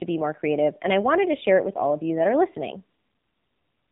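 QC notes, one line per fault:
throughout AMR narrowband mobile codec: heavy low-bitrate coding, consistent with about 6.7 kbps AMR-NB, leaves nothing above 3.8 kHz, making speech muffled, buzzy and synthetic.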